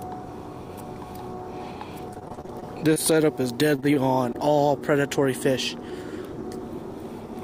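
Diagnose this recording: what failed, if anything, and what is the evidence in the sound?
The failure is at the network stage: repeated packet loss producing a robotic sound, in two stretches. From 2.13 to 2.98 s the audio turns choppy, with brief holes up to 27 ms long and about a fifth of that span patched over. From 3.76 to 4.36 s the same texture returns more lightly, with gaps up to 23 ms. Lost packets were concealed by extending the preceding sound, and the next loss followed before the audio recovered.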